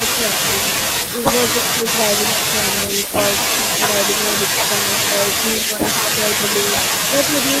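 Echo leak at 1.06–1.26 s, 3.05–3.17 s and 5.75–5.85 s: brief speech copies 176 ms late, roughly 15 dB down, likely slipping past a speakerphone's echo canceller.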